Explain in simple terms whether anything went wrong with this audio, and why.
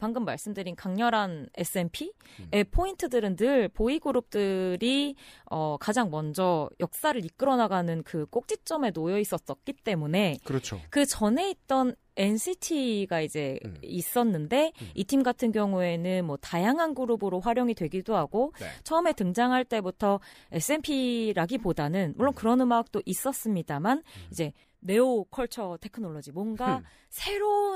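Nothing went wrong here.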